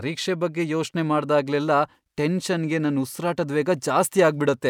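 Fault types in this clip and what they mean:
No faults can be heard.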